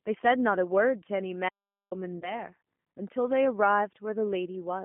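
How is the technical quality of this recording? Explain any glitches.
The technical quality is poor, with a narrowband codec throughout and two separate interruptions.

Throughout, the speech passes through the G.729 codec at 8 kbit/s. It is rebuilt from a vocal tract filter, pitch prediction and sparse pulses, so it sounds rough and synthetic. On a spectrogram, energy sits only between about 200 Hz and 3.4 kHz, with nothing above.

From 1.49 to 1.91 s there is an audio dropout to silence lasting about 424 ms. The sound stops mid-flow and returns abruptly, with no room tone in the gap, most likely because the input link failed while zeros kept being written. The waveform shows a flat line and the spectrogram a blank column.

From 2.20 to 2.43 s there is VoIP packet loss concealed by the speech codec. Only 20 ms were lost, which fits two 10 ms frames. The decoder extrapolates its last pitch and filter, producing a brief smear that fades and leaves the voice weakened afterwards. 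On a spectrogram this appears as smeared energy that thins out over time.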